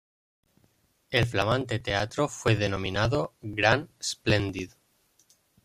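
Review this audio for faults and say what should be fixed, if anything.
Periodic USB or driver dropouts run through the speech from 0.08 s to 5.55 s as a steady ticking, one every 0.096 s (about ten per second), around fifty in all. At each tick roughly 4 ms of audio is skipped outright rather than padded with silence, so the waveform jumps and the speech briefly lurches forward. The strict spacing points to a background task stalling the USB bus or audio driver on a fixed schedule. To prevent it, find and disable or reschedule the periodic process competing for the bus, and raise the driver buffer size so brief stalls no longer cost samples.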